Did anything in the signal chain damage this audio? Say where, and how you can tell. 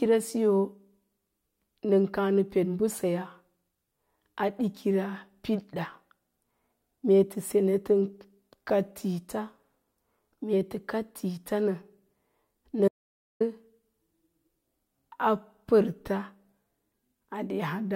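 Yes. An audio dropout to silence runs from 12.88 to 13.40 s. The speech cuts off mid-flow and returns after about 0.52 s. The gap is silent, with no room tone. The cause is likely a lost input link or device while the recorder kept writing zeros.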